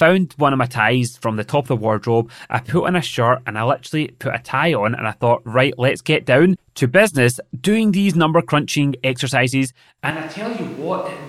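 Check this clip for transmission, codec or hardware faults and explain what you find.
One fault appears. From 10.11 s to the end, the speech turns suddenly roomy and hollow, with thinner bass. It drops roughly 10 dB, and room noise rises. This is likely a switch to a distant microphone.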